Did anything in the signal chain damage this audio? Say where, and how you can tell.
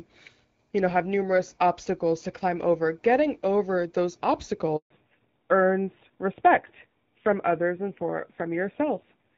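Yes. At the network stage, a handover gap cuts the audio from 4.76 s to 4.90 s. While the call was passed from one network to another, no speech frames reached the receiver for about 140 ms. You hear the speech fade out within a few tens of milliseconds, then hard silence until the new link delivers frames again. Whatever was said in that window never arrived and cannot be recovered.

At the codec stage, there is a fallback to narrowband from 4.90 s to the end. Straight after the handover, the call dropped from the wideband codec, whose light coding before the gap fits AMR-WB at about 12.65 kbit/s, to a narrowband one, likely AMR-NB at around 7.4 kbit/s. From that point nothing survives above 4 kHz, so the speech loses its airy top and sounds duller and rougher than in the first half.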